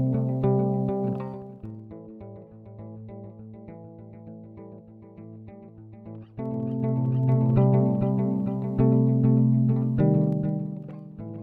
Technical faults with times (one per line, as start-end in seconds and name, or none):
1.16-1.88 zipper noise
6.24-7.56 zipper noise
10.20-11.04 zipper noise